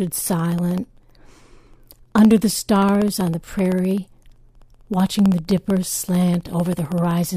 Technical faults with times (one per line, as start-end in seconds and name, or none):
0.07-7.30 periodic USB or driver dropouts